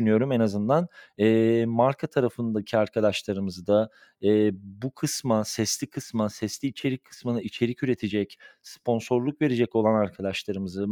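No technical faults are audible.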